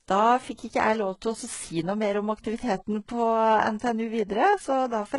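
From start to finish, the s sounds in this speech turn gritty and lispy, the treble has a synthetic sheen, and nothing sits above 11.1 kHz. This is likely HE-AAC compression at a very low bitrate, around 12 kbps, with the upper band copied up from lower frequencies.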